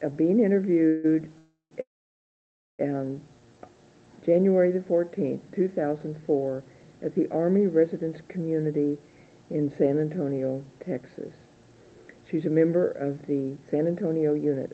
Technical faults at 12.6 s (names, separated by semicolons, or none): none